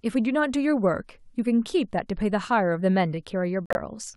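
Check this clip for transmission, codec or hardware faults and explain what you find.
There's one fault, near the end of the speech. From 3.66 to 3.77 s, a corrupt frame is muted: damaged compressed data got rejected by the decoder, and the player filled the gap with silence. You hear a dropout of about 0.11 s that cuts in abruptly, which fits roughly four frames, and the timing afterwards stays intact.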